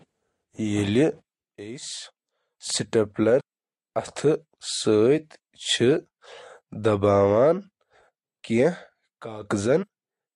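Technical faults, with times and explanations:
3.39–3.41 s compressed frames skipped: speech jumps ahead roughly 150 ms, consistent with about ten whole frames missing.
9.82–9.84 s compressed frames skipped: a shorter jump of about 100 ms, fitting a few lost frames.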